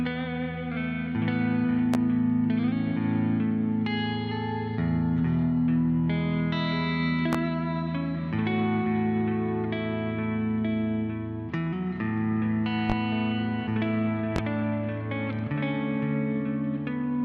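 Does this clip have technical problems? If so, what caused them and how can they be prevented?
Yes. A loud pop strikes at 1.94–1.98, 7.33–7.37, 12.90–12.94 and 14.36–14.40 s, roughly 15 dB above the sound. A voltage spike, likely from a switch, plug or static, causes each pop. Secure connections and avoid switching while recording.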